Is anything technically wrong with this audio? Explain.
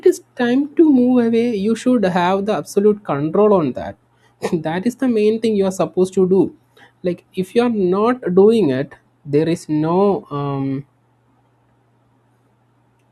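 No, nothing technically wrong turns up anywhere in this recording, so there's nothing here that needs fixing.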